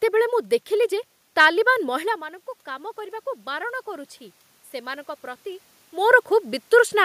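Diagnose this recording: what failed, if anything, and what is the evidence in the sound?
Automatic gain rising in call processing: from 2.02 to 4.17 s, voice and room noise swell together by about 3 dB, which a talker moving closer wouldn't do.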